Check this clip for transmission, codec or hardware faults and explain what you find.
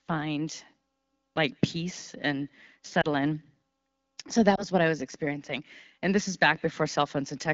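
There are two short glitches from lost AMR speech frames on top of a clean-sounding AMR wideband (HD Voice) link. The first is at 3.01 to 3.06 s, right after "like peace and", and the second is at 4.55 to 4.64 s, just before "what I was experiencing". A frame failed its checksum, so the decoder reused the last good pitch and vocal tract settings at reduced gain. Each one sounds like a brief dip or warble, which fits a single lost 20 ms frame.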